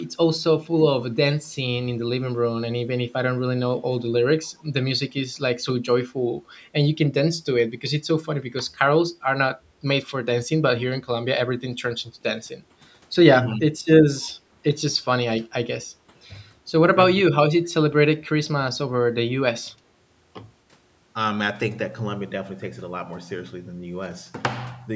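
Speech recording carrying a call's echo leak at 1.10–1.14 s, 4.46–4.50 s and 14.21–14.29 s: faint scraps of the talker's own voice return about 254 ms late, roughly 40 dB below the speech in the first two and about 30 dB below at 14.2 s, likely because the far side's echo canceller let some loudspeaker pickup through. Speech suppressed in double talk appears at 13.47–13.71 s, 14.93–15.05 s and 16.07–16.12 s, where the talker's level briefly dips by roughly 10, 15 and 5 dB for short stretches. The likely cause is the echo canceller turning down the near talker while both sides spoke at once.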